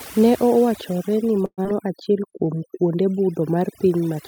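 Heavy-handed noise reduction runs through the whole speech recording. It's a case of overdone noise removal: the tool clamps individual frequency bands down hard whenever they sit close to what it thinks the noise is, and the softer parts of the voice get caught too. The background goes almost dead except for little twinkling specks.

At 1.45 s the audio breaks up until about 1.67 s, with the likely cause being a long network dropout. What you hear is roughly 194 ms of the last sound being stretched out as a fading buzzy tail, then about 60 ms of near silence. When the audio resumes, around 80 ms of material is simply gone, and the timing afterwards has shifted by about 50 ms.

Right after that, from 1.73 s to 2.77 s, a jitter buffer slow-down kicks in. The receiver is rebuilding its reserve by repeating single pitch periods and small slices of pauses over and over, adding 72 ms in total. 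That stretch plays at about 93% speed with the pitch unchanged, so the sounds feel drawn out and a bit sluggish.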